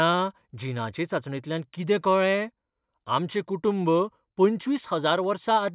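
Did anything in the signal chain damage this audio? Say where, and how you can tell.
No, nothing in the chain audibly damages this speech recording at any stage.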